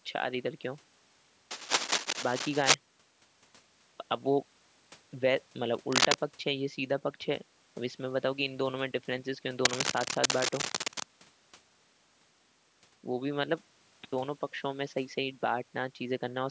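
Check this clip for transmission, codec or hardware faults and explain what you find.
One hardware fault recurs: cable scratch noise, at 1.51 to 2.74 s, 5.92 to 6.14 s and 9.65 to 11.03 s. The likely cause is a worn cable or connector being moved, which makes its contact resistance change rapidly. That adds dense, uneven scratching about as loud as the speech, and somewhat louder in the brief middle burst. On a spectrogram each burst appears as a ragged broadband smear reaching the 8 kHz limit of the call path. On the waveform it shows as clusters of jagged spikes.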